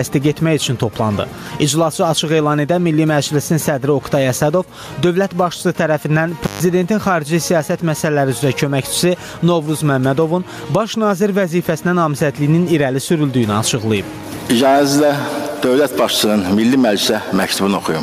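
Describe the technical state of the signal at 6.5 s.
At 6.5 s the signal is inside an intermittent contact fault running from 6.44 to 6.60 s, with the line open for about 140 ms. A loose cable or plug briefly loses connection, so the sound drops out or breaks up, with crackle where the contact breaks and remakes and hiss while it is open. The crackly edges and the residual hiss set it apart from a clean digital dropout, which cuts to silence without that contact noise.

The same moment also carries the gain pumping heard across the whole clip, with the level swinging by around 10 dB. The likely cause is gain set far too high for the microphone, with a fast limiter or compressor pulling it down on each loud sound and letting it rise again afterwards. The result is squashed dynamics, with loud and soft parts closer in level. Unlike a steady fade or a fixed level change, the movement follows the loudness of the sound itself.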